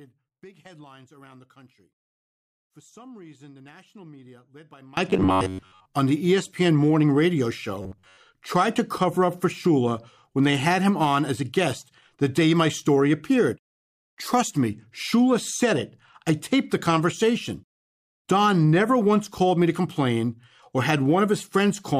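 From 0 to 4.97 s the speech falls by about 26 dB into a faint residue rather than silence. That points to one channel inverted, likely reversed polarity on one side, so the centred voice cancels in a mono sum and only the small difference between channels remains.

From 5.10 to 5.88 s, just before "on the", and again from 7.82 to 8.17 s, between "morning radio" and "tried to cover up", the speech becomes a rigid metallic buzz at 93.8 Hz. This is robotic sound from repeated short buffers. Most of the audio in these spans is a repeated chunk about 10.7 ms long, likely because new audio arrived too seldom and the last buffer was replayed. Unlike ordinary distortion, the buzz stays at a fixed rate while following the original speech only roughly.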